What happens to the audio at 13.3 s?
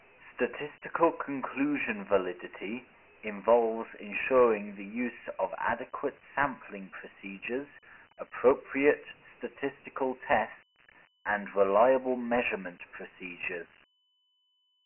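At 13.3 s the speech carries Dialogic VOX ADPCM damage, present across the whole clip. Each sample is coded as a 4-bit step, so heavy grit and hiss trail the speech. Nothing sounds above 3 kHz, which fits a 6,000-sample, 24 kbps stream.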